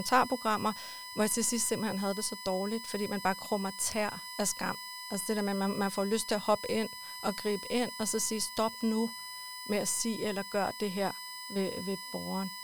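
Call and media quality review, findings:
USB whine under the speech, start to finish. Fixed-pitch tone on a 1 kHz fundamental, with the 5 kHz harmonic loudest, sitting roughly 10 dB below the speech. Probable component: a USB-powered interface or mic. Its current draw pulses with the bus's 1 ms frames and gets into the audio through shared power or ground. Worth trying a separate supply, a ground-isolated hub or a different port.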